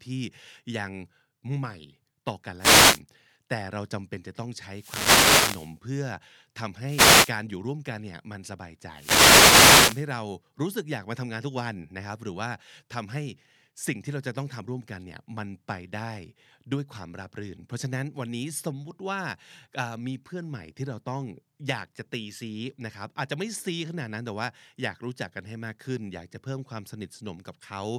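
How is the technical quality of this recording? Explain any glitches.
The speech is hit by four bursts of static, at 2.58–3.01 s, 4.71–5.79 s, 6.83–7.37 s and 8.92–10.08 s. These are wireless microphone noise hits: the FM radio link fades as reflected signals cancel, so receiver hiss swells over the voice.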